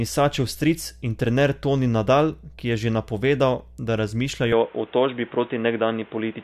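Speech runs under a steady mains hum at 60 Hz, roughly 25 dB below the voice, most likely from a ground loop or nearby transformer. On a spectrogram it is a thin, unbroken horizontal line at 60 Hz, with low harmonics stacked just above it. At 4.52 s the sound turns abruptly duller and boxier, with no gap at the join, and stays that way to the end. This points to an input switched to a poorer device, likely another microphone or a headset profile. On the spectrogram everything above 3.8 kHz disappears at that instant. The level also shifts by around 5 dB, and a new noise floor appears, roughly 30 dB under the speech, visible as a step in the waveform envelope.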